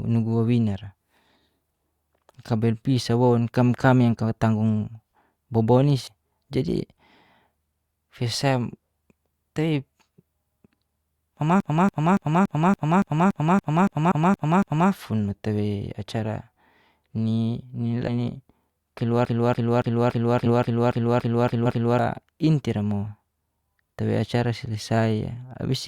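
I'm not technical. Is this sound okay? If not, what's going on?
No, this speech clip has two kinds of fault.

CD stuck on one turn, from 11.60 to 14.91 s and again from 19.25 to 21.99 s: the same short piece of sound, about 0.28 s long, plays over and over in a fast, even stutter, 12 times in the first stretch and 10 in the second, with a tiny gap at each jump. This is what a scratched disc does when the player keeps jumping back to the same spot on every turn.

Compressed frames skipped, at 6.07 to 6.12 s, 14.11 s, 18.07 to 18.10 s, 20.45 to 20.50 s and 21.65 to 21.68 s: the sound briefly jumps forward, leaving out small chunks, from a few hundredths of a second up to about a fifth of a second at 18.07 s. The file stores sound in small blocks, which fits 20 ms blocks here, and some were missing or damaged and got left out.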